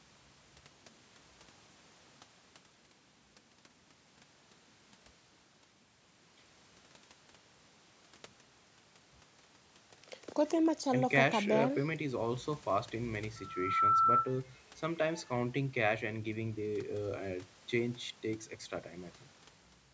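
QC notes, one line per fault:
13.36–14.32 s, loudspeaker feedback squeal: a single 1.3 kHz tone swells over roughly half a second to about 10 dB above the speech, because the microphone-to-loudspeaker loop gain exceeds unity there. The spectrogram shows one bright horizontal line, and the waveform envelope balloons.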